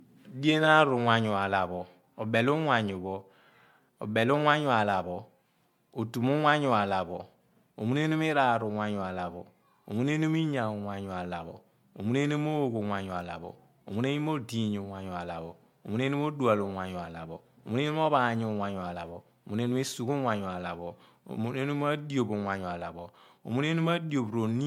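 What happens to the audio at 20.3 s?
At 20.3 s the speech has the swirly, hollow, smeared quality of generation loss, which runs through the whole clip. It likely comes from about four successive MP3 passes at roughly 96 kbit/s, each quantising on a shifted frame grid. The accumulated holes and blurred attacks sound worse than one encode at that rate would.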